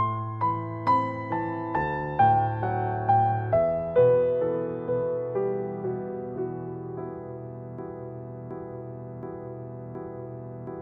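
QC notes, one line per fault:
7.79 s to end: broken-record loop; a 0.72 s fragment repeats four times back to back, likely a stalled stream resending its last chunk.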